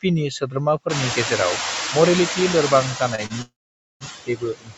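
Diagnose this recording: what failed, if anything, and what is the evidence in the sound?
Call processing stage, noise suppressor artifacts. Throughout the speech, the residual background is pulled down by only about 1 dB, frame by frame. It dips between syllables and lifts under them.

Call processing stage, noise suppressor catching up. Around 1 s the room noise jumps by about 22 dB. From 0.89 to 2.91 s it comes through with less reduction, then settles lower, about 5 dB down, as the suppressor's noise estimate spends roughly two seconds adapting.

Call processing stage, speech cut by the noise suppressor. From 2.96 s to the end, the suppressor treats parts of the speech as noise. Quiet stretches and word edges drop by as much as about 22 dB. They sound swallowed and faint against the background.

Network and jitter buffer stage, short stall from a late packet. At 3.15 to 3.21 s and 3.26 to 3.33 s, a sound is held too long with a slight buzz or dip. 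The receiver stretched it for 27 ms and 37 ms while waiting. Nothing is lost, only delayed.

Network and jitter buffer stage, call audio freeze. From 3.42 to 4.04 s the sound stalls for about 0.59 s. A brief fading continuation gives way to half a second of silence. Then the audio resumes where it stopped. The likely cause is packets held up in transit, emptying the jitter buffer.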